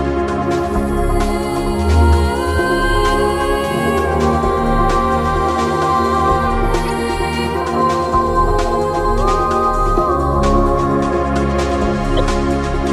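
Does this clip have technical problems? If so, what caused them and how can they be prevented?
Yes. Two brief bursts of corrupt frame decoded damage occur, at 6.85 to 6.90 s and at 12.17 to 12.19 s. Flipped bits inside compressed frames led the decoder to apply wrong gains and codes, spraying energy at unrelated frequencies for a few frames. The second burst is louder, with its error peaking around -10 dBFS against about -15 dBFS for the first. Unlike a dropout or concealed loss, the sound is replaced by foreign noise rather than smeared. Frame checksums that discard and conceal damaged frames would prevent it.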